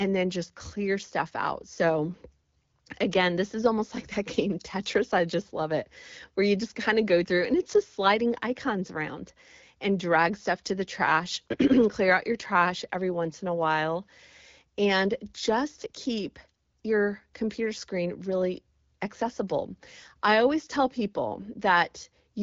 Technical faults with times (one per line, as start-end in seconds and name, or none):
none